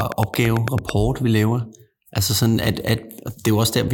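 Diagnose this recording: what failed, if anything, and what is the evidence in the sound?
A regular click train, nine per second, about 15 dB above the speech, from 0.01 to 0.90 s before "vi laver"; likely analogue-wiring interference.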